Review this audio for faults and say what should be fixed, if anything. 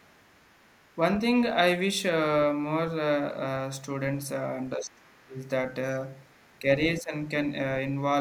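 Other side's voice leaking through, 0.00 to 0.96 s and 6.33 to 6.59 s: a second, very faint voice sits under the talker, roughly 40 dB below the main speech. The likely cause is the far end's audio playing from the talker's loudspeaker, reaching the microphone, and not being fully removed by the echo canceller. Prevent it by using a headset or giving the echo canceller a longer, better-converged filter plus a stronger residual-echo suppressor.

Speech suppressed in double talk, 4.76 to 5.43 s and 6.96 to 7.13 s: the talker's level dips while both sides overlap. The first dip is about 25 dB deep and lasts around 0.7 s, and the second is about 10 dB and lasts roughly 0.15 s. This is likely the echo canceller mistaking overlapping speech for echo and attenuating everything. Prevent it with a more reliable double-talk detector that protects near-end speech.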